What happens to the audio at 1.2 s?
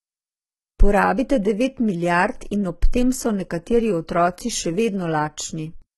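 At 1.2 s the speech carries the same heavy coding damage heard across the whole clip, most likely from HE-AAC compression at a low bitrate, consistent with about 16 kbps. Only the lower spectrum is properly coded. The treble is synthesised by copying lower bands upward under a coarse envelope, so upper harmonics fail to align with the real ones, and s sounds come out gritty and metallic. Nothing remains above about 11.8 kHz.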